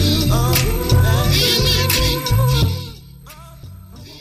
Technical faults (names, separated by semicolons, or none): none